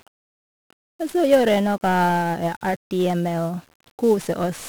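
From start to end, the speech carries heavy 1-bit DFPWM compression damage, a rate that fits a 48 kbps stream. Each one-bit step nudges the waveform up or down, leaving fuzzy crackle and hiss that buries the treble, unlike the swirly, band-limited artefacts of perceptual codecs.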